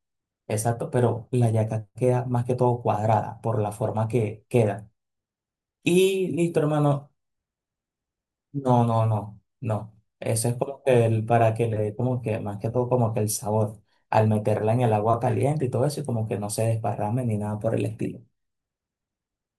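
No technical faults occur at any point in the speech, so there is nothing to describe in time order.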